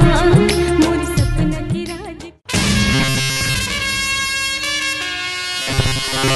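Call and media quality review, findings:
Robotic sound from repeated short buffers, 2.93–3.55 s and again 5.62–6.35 s. Sound goes rigid and metallic, a fixed buzz around 134 Hz, still loosely tracking the original. Likely cause: playout side starved, re-looping a chunk of roughly 7.5 ms, so the loop rate sets that pitch. Most of each stretch is repeated material, real audio skipped underneath. Worth checking jitter buffer/underrun handling.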